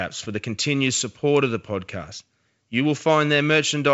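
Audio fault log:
No faults detected; the speech carries G.722 wideband coding at 64 kbit/s, heard as a band limit near 7 kHz with at most a faint hiss in the upper band.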